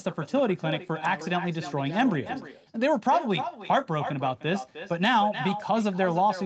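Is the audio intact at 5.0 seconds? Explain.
No. At 5.0 seconds, as throughout the clip, the speech carries an echo with no canceller. The far end is playing the call over a loudspeaker, its microphone picks that sound up, and nothing removes it before it returns. Each phrase is therefore followed, roughly a third of a second later, by a copy about 10 dB quieter that sounds thin. The call's normal microphone processing also leaves nothing above 8 kHz.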